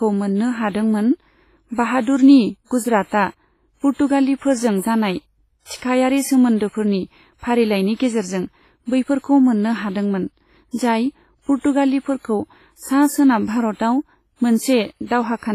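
Throughout, the speech rings and washes, with hiss breathing alongside it and nothing above 15.3 kHz, likely heavy WMA compression at a low bitrate, around 24 kbps. From 5.77 to 5.82 s, pre-echo spreads about 54 ms of hiss before the attack of "सोमोन्दोफोरनि फारिलायनि गेजेरजों", leaving the onset smeared and soft.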